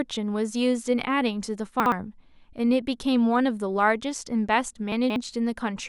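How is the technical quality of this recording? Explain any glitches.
The recording has two brief glitches, both chunks out of order. At 1.8 to 1.92 s, one 60 ms chunk plays one slot late. At 4.92 to 5.16 s, a chunk plays three slots late. Nothing is missing, but the misplaced audio and its hard joins make a jumbled moment.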